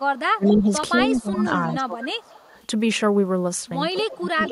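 Speech, with the talker's level repeatedly pushed down and a faint late copy of the voice appearing in places. From 0.36 to 0.7 s, 1.21 to 2.35 s and 3.93 s to the end, the voice dips by up to roughly 20 dB and thins or breaks up. That is speech suppressed in double talk, likely from an echo canceller clamping down while the far side spoke at the same time. What marks it is that the talker's own signal loses level, with nothing added. The echo leak does the opposite and adds sound: at 0.45 to 0.61 s, 0.98 to 1.21 s and 2.24 to 2.5 s, a repeat of the voice trails the original by about 220 ms. It sits about 15 dB below the speech, and about 30 dB below in the last stretch. That steady delay points to a loudspeaker pickup that the far end's echo canceller likely failed to remove.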